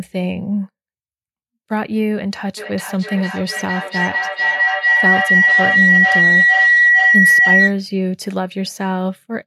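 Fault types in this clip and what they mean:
Feedback howl: from 2.57 to 7.8 s, a microphone and loudspeaker on the same call feed each other, each trip round the loop adding level, so the sound narrows to a tone near 2 kHz, pulsing about twice a second and peaking about 7 dB above the speech.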